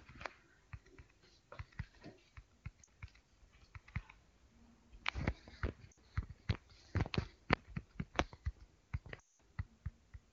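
Lost AMR speech frames break up the speech four times, over the clear sound of the AMR wideband codec. At 2.84 s there is a short dip of about 40 ms. From 5.92 to 5.97 s, about 60 ms drops to near silence. From 7.53 to 7.57 s, a brief 20 ms blip. The worst gap runs from 9.20 to 9.31 s, about 200 ms. There the decoder repeats the last good frame with falling gain. The sound drops to near silence within two frames. Speech returns weak for a moment.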